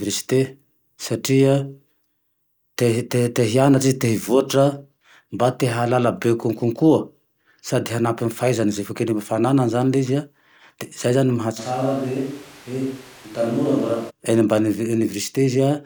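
From 11.6 to 14.1 s the pickup likely switches to a distant microphone after the close one dropped out. The speech turns abruptly roomy and hollow, thinner in the bass, about 5 dB quieter, with room noise only around 20 dB down, before snapping back.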